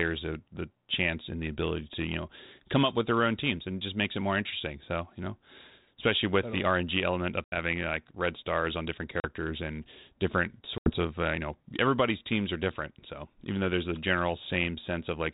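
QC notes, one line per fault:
7.44 to 7.57 s, 9.20 to 9.27 s, 10.78 to 10.93 s: packet loss on an ADPCM call. Holes of 80 ms, 40 ms and 80 ms (a few packets, then a couple, then a few) are filled with silence, before "like red stars on", before "and different" and before "of uh you know". The gaps cut off sharply rather than fading, unlike a dropout with concealment. Afterwards the decoder's predictor and step size no longer match the sender's, so the sound comes back with brief, slight distortion that clears within tens of milliseconds. The narrowband coding, which fits 32 kbit/s G.726, stays light.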